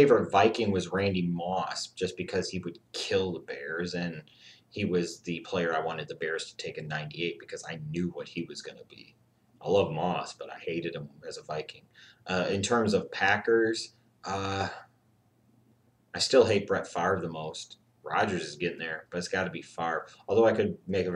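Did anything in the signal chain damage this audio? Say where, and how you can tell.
No, nothing along the chain from capture to playback has left an audible mark on this signal.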